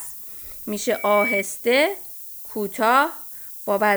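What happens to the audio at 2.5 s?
At 2.5 s the speech is still carried at low bit depth with noise shaping, which runs through the whole clip: only 7 bits represent each sample, and the rounding error is fed back to shove it upward in frequency, producing a steady, thin hiss climbing toward the top of the band, roughly 15 dB below the voice.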